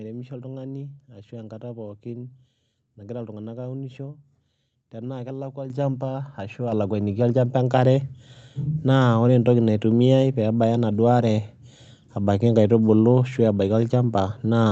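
Speech carrying a microphone volume stepped up fault, twice: at 5.7 s the level jumps by about 9 dB, and at 6.72 s by a further 4 dB or so. Both steps are likely the call software's automatic gain control raising the device's input volume, so voice and background noise rise together. On a waveform the envelope widens abruptly at each point, and a spectrogram shows every band brightening at once. The top end stops near 8 kHz, consistent with a call codec path.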